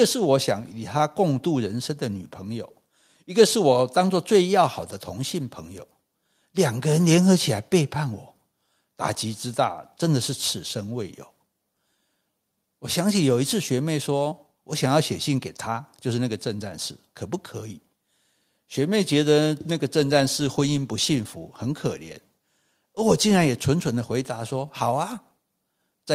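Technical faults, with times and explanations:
Nothing technical stands out here; the recording holds together the whole way through with no faults to report.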